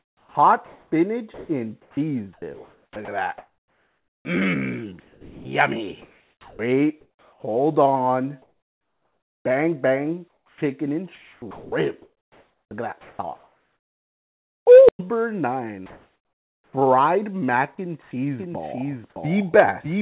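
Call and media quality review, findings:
Sound chopped by the voice detector, 0.0–7.43 s and 10.28–14.66 s. Choppy sound. About 3.8 s and 3.0 s replaced by fill. Likely cause: sender VAD/DTX toggling repeatedly, with comfort noise substituted for quiet stretches.

Comfort noise in place of the background at 8.42–9.44 s (about 2 dB quieter), 15.86–16.73 s (about 3 dB louder) and 18.02–18.11 s (about 4 dB quieter). Real background detail swapped for steady, featureless noise, likely receiver-generated comfort noise during DTX pauses.

Onset clipped by the voice detector at 16.67–16.73 s (60 ms lost) and 19.14–19.16 s (20 ms lost). Sound starts abruptly, missing its soft attack, with comfort noise filling the gap. Likely cause: VAD slow to detect resumed sound, so the first frames were not sent.

Doubled audio track from 18.39 s to the end. A full-band second copy, about 5 dB down, trails by roughly 700 ms. 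It has no reverb tail or room colouring and cuts in abruptly. Likely cause: a second, slower capture path or a misaligned edit mixing the same audio twice.

Call path band-limited to 4 kHz, consistent with a narrowband G.711 call leg.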